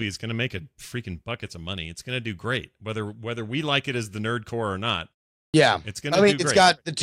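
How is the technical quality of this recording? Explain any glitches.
There is one glitch, a brief loss at the start of a phrase. At 5.5 s comes a clipped start after a pause. The output sat idle through a 0.44 s gap and took 38 ms to wake. Speech therefore bursts in abruptly, missing its first sound.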